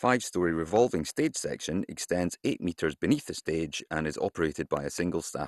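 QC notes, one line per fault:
Throughout: MP2 compression. The audio is dull, with a gurgling, granular grain on the speech and nothing above 12.2 kHz. The damage is plainly audible and fits MPEG Layer II running at about 64 kbps, likely starved of bits. Upper sub-bands are switched off and the remaining ones are coarsely quantised. On a spectrogram the energy stops at a hard ceiling near 12.2 kHz, with blocky bands flickering on and off below it.
0.76–0.78 s and 4.77–5.01 s: loud pop. The first is a single sharp pop just before "stage section extends eight". The second is a double pop, two hits in quick succession. Each peaks about 10 dB above the speech, which carries on underneath. The likely cause is a sudden voltage step or pulse, such as a switch, static or a driver glitch, shaped by the circuitry after it. On the waveform these show as tall isolated spikes. On the spectrogram they show as full-height vertical lines.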